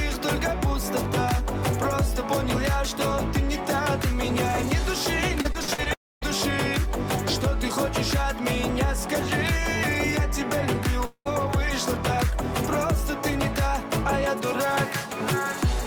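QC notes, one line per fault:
5.41–5.88 s, repeated packet loss (robotic sound): five short holes, the longest 52 ms, about 160 ms missing in all. Each gap is filled by stretching the preceding sound, so about a third of this span is patched and comes out choppy.
5.94–6.23 s and 11.05–11.27 s, long network dropout: the sound breaks off for about 280 ms and then about 200 ms. A fading buzz or hiss carries on from the last fragment before silence sets in, about 240 ms and 80 ms, which likely reflects audio that never arrived.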